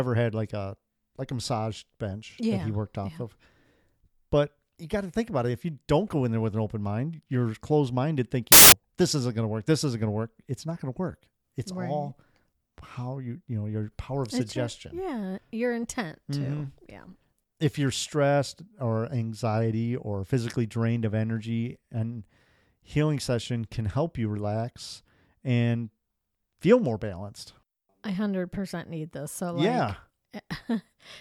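From 8.52 to 8.72 s, wrong sample width, consistent with 16-bit data read as packed 24-bit: loud noise buries speech running 1.5 times fast. The waveform shows a dense, loud block and the spectrogram a broadband smear.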